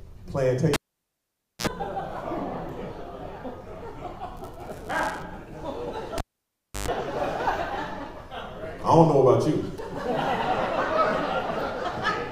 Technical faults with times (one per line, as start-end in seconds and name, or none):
0.74-1.67 cable pulled and plugged in
4.37-5.23 buffer tearing
6.18-6.88 cable pulled and plugged in